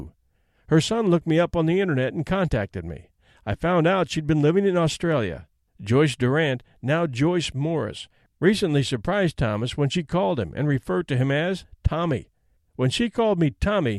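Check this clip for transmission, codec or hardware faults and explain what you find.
Nothing in the recording points to any fault anywhere along the signal chain.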